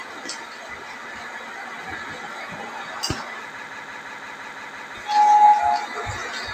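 It's a short clip of sounds with a noise suppressor applied to music or sounds running the whole way through. It treats the steady parts and tails as noise, so level swings by around ten decibels, pumping as attacks get through and everything held sinks.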